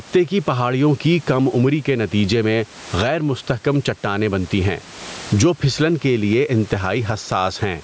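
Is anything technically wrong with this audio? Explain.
Yes, gain pumping throughout: the gain swings by about 15 dB, likely from excessive gain driving a fast limiter. Unlike a noise gate, it does not cut the room noise out.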